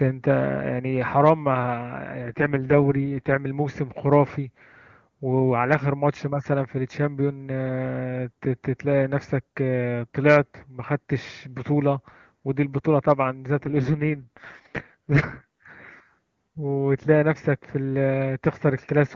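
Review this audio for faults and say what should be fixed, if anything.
An AMR rate drop hits the speech at 2.22 to 3.38 s and 13.63 to 15.66 s. It turns rough and synthetic without a gap or narrowing, which points to the AMR-WB coder falling from 23.85 to 6.6 kbit/s on a weak radio link. Better coverage or link margin would prevent it.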